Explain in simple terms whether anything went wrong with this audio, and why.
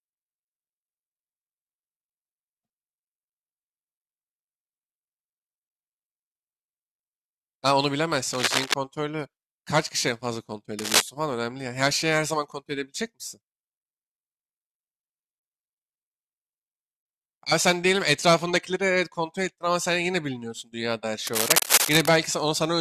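Three bursts of cable scratch noise cross the speech at 8.33 to 8.74 s, 10.79 to 11.01 s and 21.27 to 22.13 s: rough, uneven scratching, likely from a worn cable or connector being moved, unlike steady hiss or a single click.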